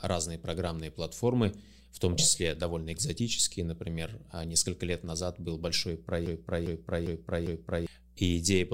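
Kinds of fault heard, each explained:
Mains hum: a steady low 60 Hz tone sits under the speech throughout, about 30 dB below it, from power-line coupling such as a ground loop.
Broken-record loop: a 0.4 s fragment repeats four times back to back from 6.26 to 7.87 s, likely a stalled stream resending its last buffer.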